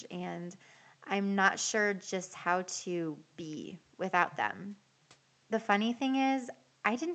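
No technical faults can be heard in this speech.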